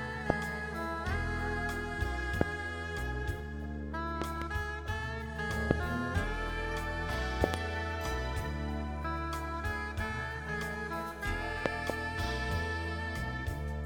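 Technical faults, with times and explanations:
0.30 to 11.92 s, loud pop: single pops at 0.30–0.32, 2.41–2.43 and 5.71–5.73 s, and close pairs at 4.22–4.44, 7.44–7.56 and 11.66–11.92 s, each peaking some 20 to 25 dB above the surrounding sound. Each is likely a sudden voltage step, from a plug, switch, static or driver glitch, that the following circuitry rounds into a thump. Unlike a dropout or an edit click, the sound carries on unbroken beneath each pop.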